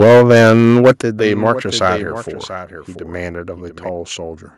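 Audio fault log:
0.00–0.91 s and 1.86–1.88 s, microphone overload: The loudest syllables carry a harsh, crunchy crackle from the very start until 0.91 s. There, peaks are pushed about 8 dB past the ceiling and roughly a sixth of the samples are flattened. A much briefer flare at 1.86–1.88 s is about 2 dB over, with only a small fraction of samples clipped. The likely cause is microphone input gain set too high, so the converter cuts the waveform tops off flat.
0.03 s, 1.02 s and 2.04 s, microphone volume stepped down: The sound and the background noise drop together in a single sudden step each time, by about 3 dB, then about 9 dB, then about 4 dB. Each drop sits right in or just after a distorted stretch: the first during the opening overload, the second shortly after it ends, and the third after the flare at 1.86 s. This is likely the call software's automatic gain control lowering the device input in one jump when it detects clipping.
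1.19–3.89 s, doubled audio track: A second, full-band copy of the sound trails the original by about 0.7 s at roughly 10 dB lower. It has no reverberant tail or room colouring, which sets it apart from a natural echo. It cuts in abruptly at 1.19 s and vanishes just as abruptly at 3.89 s. The likely cause is the same audio being mixed in twice, with a slower capture path delivering the extra copy a fixed time late.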